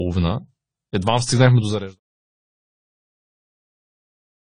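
From the start up to about 2.96 s, the speech plays like an adaptive stream starting at a low bitrate. The player picked a thin version to get going fast, so there's nothing above roughly 9.9 kHz, the top end sounds dull and a bit smeary, and the codec artefacts are obvious, which fits a low-rate AAC stream around 24 kbit/s. Right before "че тая" it snaps up to a much fuller version, likely around 96 kbit/s, with no gap.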